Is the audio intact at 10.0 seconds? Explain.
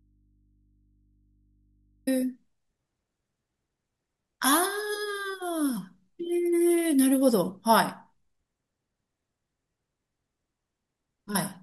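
Yes, the audio is intact at 10.0 seconds: the speech runs on cleanly there with no dropout, click or other fault.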